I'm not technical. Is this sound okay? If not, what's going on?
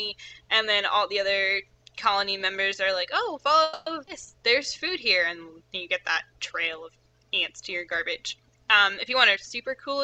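No, there are four glitches packed into a few spots.

At 3.63 to 3.88 s there's a call audio freeze: the sound stretches into a fading buzz for about a quarter second, likely because network data arrived late.

Right after, at 4.06 to 4.09 s, a skip ahead jumps past a tiny chunk, just under a tenth of a second, leaving an almost direct join.

From 4.38 to 4.78 s, a jitter buffer slow-down plays things at 86% speed, same pitch, so it sounds a bit drawn out.

Near the end, 9.06 to 9.97 s, a jitter buffer speed-up runs at 109%, trimming about a tenth of a second and sounding slightly rushed.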